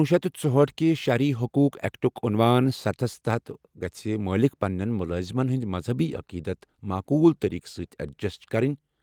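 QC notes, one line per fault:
No faults found in this clip.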